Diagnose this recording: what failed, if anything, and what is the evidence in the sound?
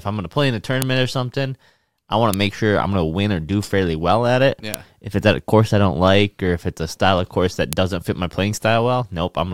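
The failure is at the storage stage, where separate WAV pieces were joined. Sharp, loud clicks land at 0.82, 2.34, 4.74 and 7.73 seconds. Each is a single snap, far too short to be part of the speech, and each stands out regardless of what the speech is doing. This is a file header played as audio. When the pieces were joined, their headers were left in. Those few dozen bytes of metadata play as sample values, so each piece boundary snaps.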